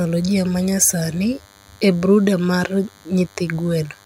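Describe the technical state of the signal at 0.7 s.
At 0.7 s the speech carries DECT cordless phone buzz, which runs through the entire clip rather than starting or stopping near this point. A DECT handset or base station close by transmits a short radio burst every 10 ms, and the audio circuitry rectifies each one, so a 100 Hz pulse train lands in the signal. It sounds like a thin, steady, harmonically rich buzz, sitting roughly 30 dB beneath the speech.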